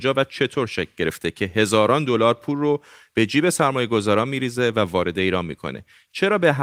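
Speech recording with no technical faults; the signal holds steady and intact throughout.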